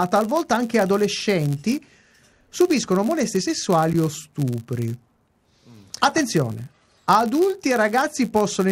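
It's a speech recording with a block size mismatch (padded) running through the whole thing: one stage hands over slightly shorter blocks than the next expects, so zeros fill each gap, giving a steady buzz near 99.6 Hz and a barely slower pace (0.996x) at normal pitch.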